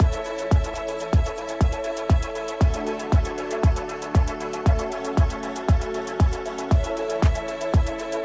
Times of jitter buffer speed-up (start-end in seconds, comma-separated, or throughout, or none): 0.99-1.82